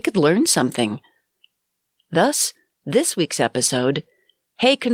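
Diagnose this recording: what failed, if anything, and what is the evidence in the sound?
A brief smear at 3.67–3.71 s, after "this week's", is short concealed packet loss in the network; the decoder extended the preceding sound across the gap.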